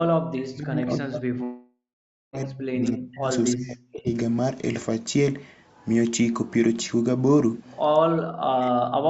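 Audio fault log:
0.28–3.27 s, 3.52–4.09 s, 8.07–9.09 s, speech suppressed in double talk: level sinks by up to around 40 dB and breaks up, likely the echo canceller ducking the talker while the far side speaks.
1.43–2.35 s, long network dropout: about 0.9 s of audio is lost, a fading concealment buzz gives way to roughly half a second of silence, likely missing packets.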